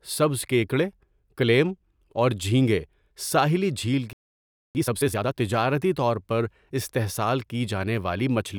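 At 4.13 s, just after "اور جھینگے ساحلی جھیل", the speech cuts to silence for about 0.62 s. This is a playback stall. The player likely ran out of data or was blocked, so output stopped until it recovered at 4.75 s.

From 4.75 s to 5.35 s comes time-compressed catch-up. The player trims its backlog by cutting out small pieces and cross-fading them. The speech runs at twice normal speed, rushed but at normal pitch. It settles before "تجارتی طور پر استحصال".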